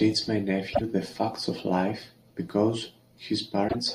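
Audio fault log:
0.69–0.81 s and 3.65–3.75 s, damaged data in a compressed stream: corrupted bytes make the decoder misread frames and lose sync, giving brief disruptions of about 0.1 s.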